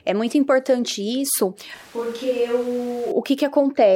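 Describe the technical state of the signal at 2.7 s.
At 2.7 s the speech sounds roomy and hollow, thinner in the bass, roughly 5 dB quieter, and with room noise sitting about 25 dB below the voice. The change comes abruptly at 1.75 s, right after "muito importante isso", and snaps back at 3.12 s. The likely cause is a switch to a distant microphone: the close microphone's feed dropped out, so a mic farther away, picking up more room reflection and ambience, briefly carried the signal.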